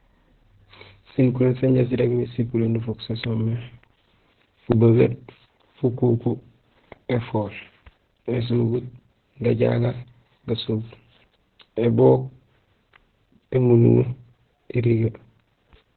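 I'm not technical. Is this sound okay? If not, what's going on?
No, it isn't. The whole clip has heavy Opus voice compression: the speech was squeezed hard, so everything above about 4.2 kHz is gone. That leaves it muffled, like an old phone call, with a hoarse, slightly robotic edge throughout.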